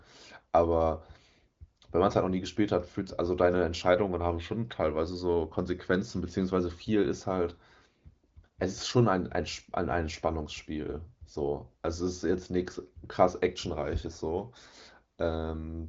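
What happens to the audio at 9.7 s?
Nothing goes wrong at 9.7 s; the speech there comes through intact, carried over what sounds like a wideband HD Voice path with its top end stopping around 7.5 kHz.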